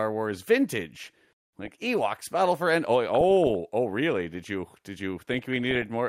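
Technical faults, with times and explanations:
1.02 to 1.71 s, 3.15 to 3.51 s (just before "oh really") and 5.32 to 5.89 s (just after "you did"), DAB burbling: the speech picks up burbling noise blips. On a weak DAB signal, a small fraction of a percent of bit errors gets past the error correction into the MP2 stream. Corrupted samples then put short blips of noise in single sub-bands, and corrupted scale factors make individual sub-bands jump in level for up to a frame. The first and last bursts are the messiest.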